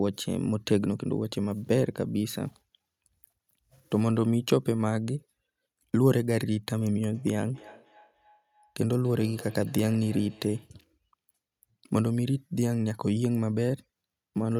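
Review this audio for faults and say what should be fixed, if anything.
Feedback echo between two devices, 7.14 to 10.75 s: another device replays this microphone's signal, which is recaptured and returns roughly every third of a second. To prevent it, keep only one device joined with audio per room, or mute the second device's speaker and microphone.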